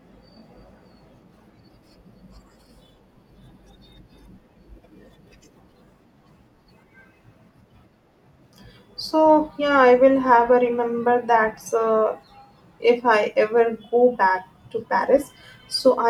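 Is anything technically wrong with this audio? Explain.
No, nothing technically wrong is audible anywhere in this speech recording.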